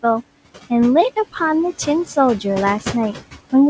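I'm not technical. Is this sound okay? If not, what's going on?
No. There are noise suppressor artifacts throughout the speech. A noise suppressor is a filter that tries to remove steady background hum. It turns the noise down strongly in the gaps between words. Under the words, the noise comes back up. So the background keeps sinking and rising as the person talks, instead of staying steady. The room noise itself sits well below the voice, and the call link trims the highest sounds.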